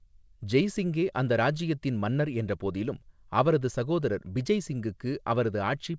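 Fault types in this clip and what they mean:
No faults are present.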